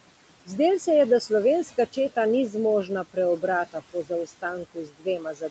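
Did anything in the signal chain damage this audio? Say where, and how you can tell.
Yes. Throughout the clip the room noise sits about 16 dB below the speech, but between phrases it is pulled down by about 18 dB, then swells back under each phrase. These are noise suppressor artifacts from the call processing stage. The suppressor estimates the steady background and attenuates every band it judges to be noise, frame by frame, so its gain keeps pumping with the speech.

The same stage also caused speech cut by the noise suppressor. Just after "četa ni", from 2.84 to 3.17 s, parts of the speech drop by as much as about 16 dB, roughly a tenth of a second in all. From 3.72 to 4.44 s, about a fifth of a second of softer sound is swallowed, with dips near 18 dB. From 4.64 s to the end at 5.51 s, the speech goes down with the noise, about 19 dB at worst. The suppressor mistook these low-level stretches for background and gated them.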